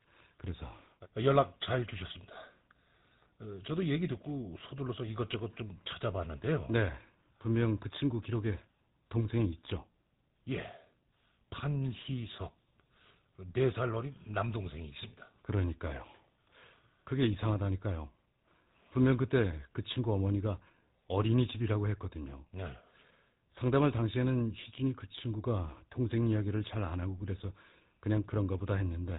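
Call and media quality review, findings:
Speech buzzy and gravelly throughout, nothing above 3.8 kHz. GSM full-rate codec, coarse pulse excitation, consistent with 13 kbps. Roughness, not mere dullness, rules out plain band-limiting.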